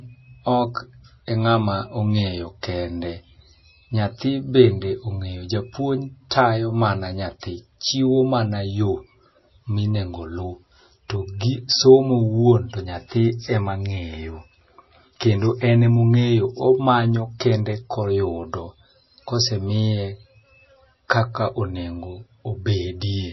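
From start to finish the speech has a dull, capped top end with nothing above about 5.8 kHz, plus a watery, swirly quality and smeared consonant onsets. That's likely MP3 compression at a very low bitrate, around 24 kbps by the sound of it, with the encoder starving the treble and letting weak detail flicker in and out.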